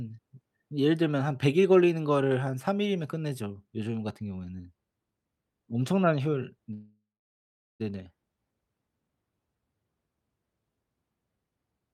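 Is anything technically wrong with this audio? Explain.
Yes. There is a call audio freeze from 6.73 to 7.82 s. The speech stops and the last sound is stretched into a fading buzz or hiss. About 0.77 s of that stretch is silence. The likely cause is packets held up in transit, so the jitter buffer ran empty and the receiver filled the wait. When the speech resumes, it picks up where it stopped. Nothing is lost, but everything after runs about 1.06 s later.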